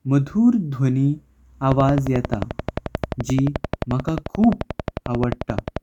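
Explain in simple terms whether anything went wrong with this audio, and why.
Something in the recording chain began injecting short electrical pulses at a steady rate, most likely interference from nearby equipment or a faulty connection or power supply. The result is a train of clicks running from 1.72 s to 5.78 s, about fifty near-identical ticks arriving evenly at 11.4 per second. They sit clearly on top of the speech and carry on through the pauses, so the sound has a constant mechanical ticking over it.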